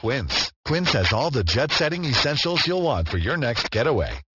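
Aliasing runs throughout: content above 6 kHz folds back almost as loud as the speech, fitting unfiltered resampling to 12 kHz, so sibilants sound gritty.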